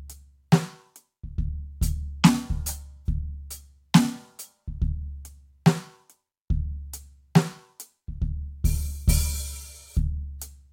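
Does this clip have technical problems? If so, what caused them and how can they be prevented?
No, nothing stood out as a technical problem when listening to this music clip.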